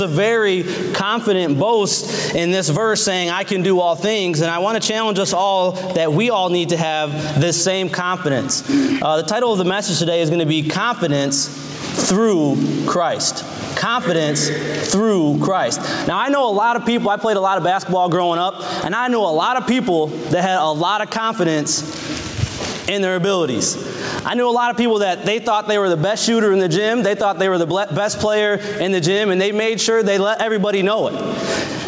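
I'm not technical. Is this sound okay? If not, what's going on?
No. There is gain pumping throughout. The level is pulled down sharply on each loud sound, a big swing. Loud and soft parts sit too close together, so it sounds squashed. The likely cause is the microphone level set far too high, with an automatic limiter pulling it down on every loud moment.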